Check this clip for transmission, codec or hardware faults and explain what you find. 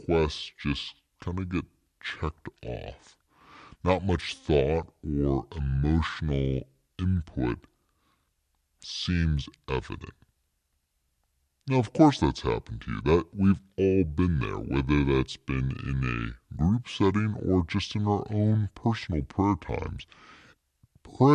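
A wrong sample rate fault runs through the whole clip. Wrong sample rate, throughout: the samples play at two-thirds of their intended rate with no conversion, which fits 48 kHz audio played back at 32 kHz. The speech runs at 0.667 times normal speed and sits about 7 semitones low, sounding slow, deep and dragged.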